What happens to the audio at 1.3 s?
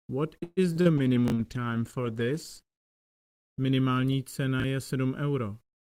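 At 1.3 s there's a brief chunks out of order glitch, from 1.28 to 1.32 s: a 20 ms chunk plays one slot late, so you get a jumbled blip. It sits inside a call bitrate drop from 0.98 to 4.97 s, where the encoder falls from 64 to 12 kbps and bottoms out for about 1.7 s, leaving the sound coarse, watery and dull on top.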